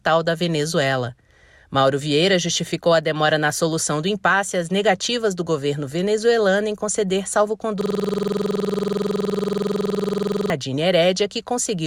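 At 7.81 s a system hang loop begins and runs until 10.5 s. The system froze while the hardware kept replaying one buffer. A 46.44 ms slice repeats 58 times, which fits a 2048-sample buffer. It sounds like a rough buzz at 21.5 Hz.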